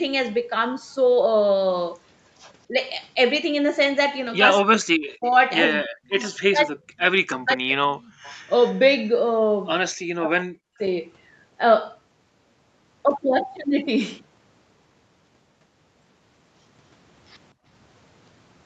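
At 2.68 s the speech dips briefly, by about 15 dB. From 4.64 to 8.21 s it drops much harder, up to about 40 dB, in pieces totalling around two seconds. This is likely speech suppressed in double talk, the echo canceller ducking the talker while the far side spoke.

Inside that stretch, faint delayed copies appear at 5.23 s and 6.34 s, then, just after it, a longer one from 8.24 to 8.79 s. This is echo leak, about 240 ms behind the speech and roughly 25 to 35 dB quieter. The likely cause is residual loudspeaker echo the canceller missed.

From 10.21 to 10.82 s the speech is suppressed again, down by about 40 dB.

At 17.54 s the background is gated by the echo canceller. The room sound falls by about 26 dB for roughly 150 ms, then returns.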